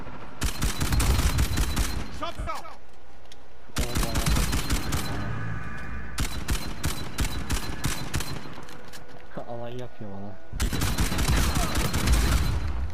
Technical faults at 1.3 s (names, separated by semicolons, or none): none